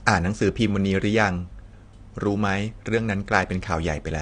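AAC compression runs throughout this speech clip: nothing survives above 10 kHz, leaving the sound dull, with a smeared, fizzy texture on sibilants. The likely cause is a low-bitrate encoder, around 32 kbps, discarding high-frequency detail and coarsely quantising what remains.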